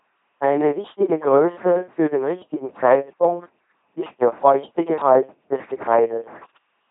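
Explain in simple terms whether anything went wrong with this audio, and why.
Something did go wrong: the whole clip has been through an LPC-10 vocoder, from start to finish. This kind of coder doesn't keep the real voice. It keeps only a rough outline of the mouth's shape and rebuilds each moment from either a steady buzz or a hiss, with nothing in between. That is why the speech sounds buzzy and robotic, with stray buzzing or hissing where it guesses wrong. It also sounds dull, because nothing above about 3.8 kHz survives.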